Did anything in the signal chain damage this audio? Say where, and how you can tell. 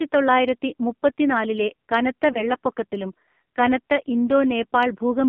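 Yes, at the codec stage: an AMR narrowband mobile codec throughout. The spectrogram is confined to about 150 Hz to 3.5 kHz, and the heavy buzzy, synthetic texture points to roughly 5.9 kbps.

At the network stage, lost AMR speech frames from 2.32 to 2.48 s: a brief warble and dip, consistent with one concealed frame. The waveform shows a decaying envelope, and the spectrogram shows smeared, repeated harmonics.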